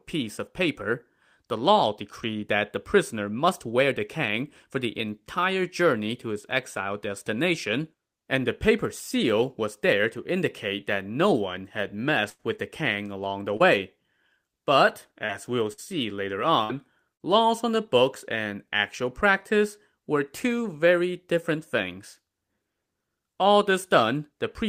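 Speech with four held, fading buzz-or-hiss patches where the sound stalls and then jumps ahead: at 12.29 to 12.41 s, between "that no one had" and "with the kang along"; at 15.73 to 15.80 s; at 16.64 to 16.75 s; and at 17.14 to 17.22 s, just before "laws on the books". This is burst of packet loss. Each time, 60 to 100 ms of audio went missing, and the receiver stretched the last sound for 50 to 93 ms while fading it out. Two shorter smears at 13.57 s, right after "the kang along the", and at 15.26 s come from short concealed packet loss. There, about 30 ms of continued sound was blended back into the real signal.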